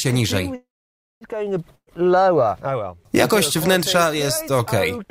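At 0.55 s the sound hangs as a fading tail, then near-silence for about 0.56 s, resuming at 1.24 s with nothing lost: likely a call audio freeze from stalled packets. At 1.75 s a burst of packet loss drops about 120 ms, briefly bridged by a decaying fill before the sound skips ahead at 1.90 s.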